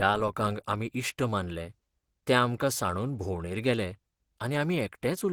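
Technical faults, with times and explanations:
Throughout: Opus compression. The speech sounds hoarse and rough, with a grainy texture, and the damage is plainly audible. The top end still reaches about 20.3 kHz, so the audio is not band-limited. The cause is likely a low-rate Opus encode in its hybrid mode, which fits a bitrate near 16 kbps. With so few bits, fine detail is not coded exactly. Bands are filled by approximation, which turns the voice coarse.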